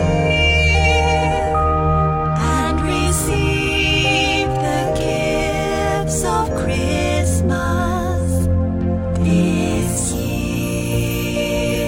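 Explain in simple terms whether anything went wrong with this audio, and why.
Nothing went wrong with this audio; there are no technical faults to point to from beginning to end.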